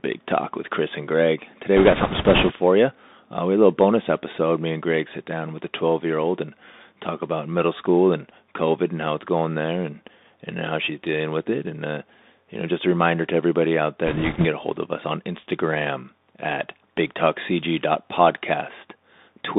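A speech recording that has passed through a Bluetooth CVSD headset codec for its whole length. The band runs only from about 200 Hz to 3.7 kHz, and the narrowband sound, scratchy s sounds and granular hiss beneath the speech fit a 64 kbps CVSD link. Unlike an ordinary low-bitrate codec, the distortion comes from a one-bit delta stream whose adaptive step cannot keep up with loud, bright sounds. This gives a slope-overload grittiness rather than warbling or swirling. Bit errors on a Bluetooth voice link appear twice: from 1.77 to 2.53 s, and from 14.07 to 14.46 s, between "reminder to everybody out" and "a hold of us". In both stretches a rushing crackle rides over the speech, with roughly 5 and 4 percent of bits flipped. What separates this from packet loss or digital clipping is the absence of sharp clicks, dropouts or repeated fragments. Each CVSD bit nudges the waveform only slightly and the error fades quickly, so corrupted bits add a diffuse noisy texture instead.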